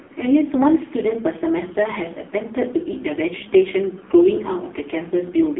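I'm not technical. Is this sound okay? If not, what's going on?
No. For the whole clip, the speech has gone through an AMR narrowband mobile codec, the squeeze used on older mobile calls. Everything above about 3.8 kHz is gone, so it sounds thin and muffled. The heavy compression also makes it buzzy and robotic.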